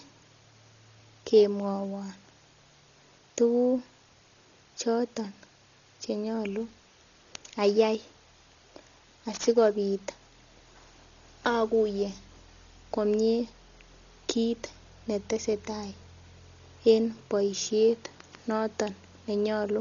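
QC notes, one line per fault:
Throughout: Dolby Digital compression, likely from AC-3 coding at a very low rate, one consistent with 32 kbps. The encoder starves many frequency lines of bits and cuts the band, so nothing reaches above 7 kHz. The speech sounds dull and muffled, with a rough, fluttering noise clinging to voiced tones.
6.59 to 12.77 s: sample clock jitter. The converter's clock wanders by several microseconds, so samples land early or late, and the error scales with waveform slope. A hiss or grit about 20 dB below the speech rides on louder, brighter passages and drops away in pauses.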